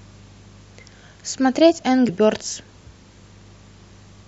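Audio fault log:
2.08 s and 3.88 s, compressed frames skipped: brief smeared blips as the audio jumps ahead roughly 70 ms, then 100 ms, consistent with a few dropped 26.1 ms frames.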